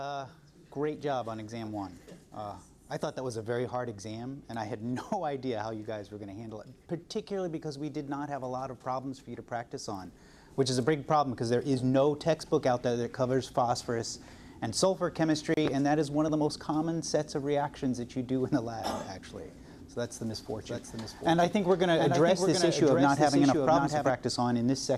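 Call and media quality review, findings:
Doubled audio track, 20.56–24.10 s. Full-band second copy trailing by roughly 0.7 s, a few dB below the original, no decay or room colour, abrupt onset and cutoff. Likely cause: second capture via a slower path, or an edit holding two out-of-step copies.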